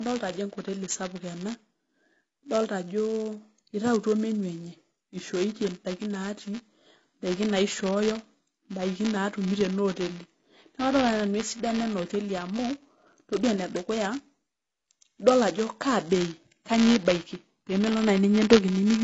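From start to finish there's buffer tearing: a robotic 200 Hz buzz riding on the speech, where writer and reader have slipped and a sliver of each buffer replays audio about 10 ms stale. The whole clip also sounds like low-bitrate audio saved at a high bitrate: nothing above 7.6 kHz plus leftover codec artefacts, likely a low-rate AAC-style encode later re-saved as high-rate MP3.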